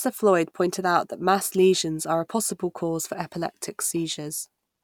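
No technical faults are audible in this recording.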